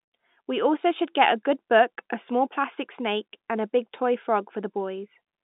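No technical faults are audible; the speech carries the narrow band of a G.711 telephone line, from 150 Hz up to 3.7 kHz.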